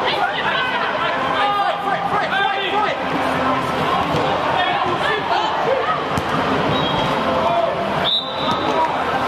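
A couple of samples were likely dropped from the stream at 2.63 s, a gap of a tiny fraction of a millisecond, so the waveform jumps straight to a later value. Nothing audible goes missing; the jump is heard as one sharp click.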